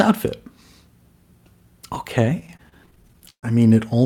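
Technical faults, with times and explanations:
1.95 s, chunks out of order: a tiny slice of roughly 5 ms played one step late, so the order flips briefly and there are three hard joins.
2.23 to 3.45 s, repeated stalls (stutter): audio arrived too slowly and the buffer kept running dry, so 17 gaps were filled by stretching the last sound, about 315 ms in all. That's roughly a quarter of the stretch, with the longest hold at 131 ms fading out. Nothing's missing, it just drags and stutters.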